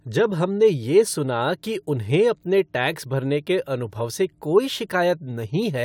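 No technical faults can be heard anywhere in this recording.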